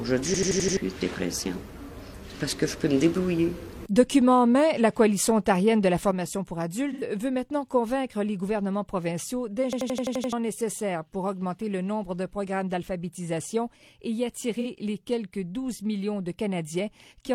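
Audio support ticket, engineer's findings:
System hang loop at 0.34–0.77 s (5 repeats) and 9.73–10.33 s (7 repeats): one 85 ms block replays at 11.7 Hz, a machine-gun stutter consistent with a stalled driver cycling a 4096-sample ring buffer. Roughly 0.4 s and 0.7 s of audio lost. Waveform shows identical tiled blocks.

Level step from 6.11 s to end, about 6 dB down, abrupt: likely one channel drops out upstream of the mono sum. Waveform envelope shows a clean downward step that never recovers.

AAC frame loss with concealment at 6.92–7.03 s (85 ms, fits two frames) and 14.60–14.67 s (43 ms, fits one frame): decoder patches from the last good spectrum. Smeared, noisy blur on the spectrogram.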